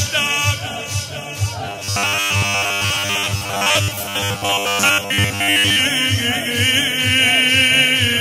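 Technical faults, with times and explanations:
1.67 to 5.79 s, robotic sound from repeated short buffers: a rigid metallic buzz at 100 Hz, likely from late-arriving audio, with 10 ms slices repeated over about 70% of the stretch. A spectrogram shows flat harmonic lines 100 Hz apart; the waveform shows identical repeating cycles.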